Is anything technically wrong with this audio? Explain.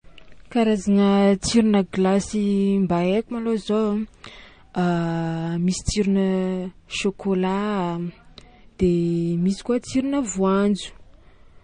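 Yes. Throughout the speech, there's likely transcoding between lossy codecs. Nothing above 9.6 kHz remains, and two layers of smearing and swirly artefacts overlap, consistent with a Vorbis encode near 63 kbit/s re-encoded to MP3 near 40 kbit/s, which compounds the earlier damage.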